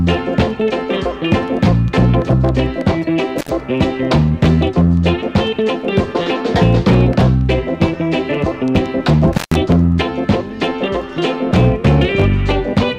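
At 3.38 s the sound drops out abruptly with a crackle at each edge, and for about 74 ms only faint hiss remains. At 9.33 s it happens again, lasting until 9.56 s, with the line open for about 141 ms. Both gaps are intermittent contact: a loose cable or plug briefly breaks the connection, so the signal vanishes, and the scraping of the contact makes the crackles as it opens and closes.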